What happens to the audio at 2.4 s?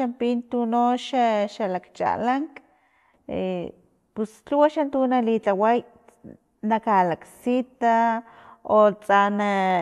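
Nothing goes wrong at 2.4 s: the audio is intact at that moment, without any dropout, click, distortion or other fault.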